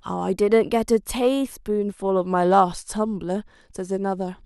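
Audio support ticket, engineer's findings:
Speech runs fast and sharp 0.34–1.92 s, about 5.5% speed-up, pitch raised roughly 92 cents, then snaps back. Drift correction step, likely in clock-sync resampler: playback rate jumped in one step to drain buffer, shifting speed and pitch together.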